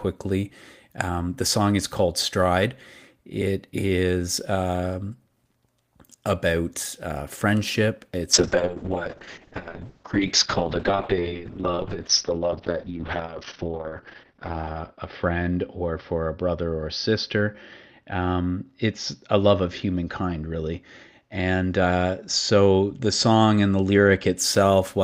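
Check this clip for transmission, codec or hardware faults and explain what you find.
A call bitrate drop runs from 8.34 s to 24.41 s, just after "about uh friendship". The encoder's rate falls from 32 to 6 kbps, bottoming out for about 5.7 s, so speech turns coarse and muffled. On a spectrogram, energy above 6 kHz vanishes.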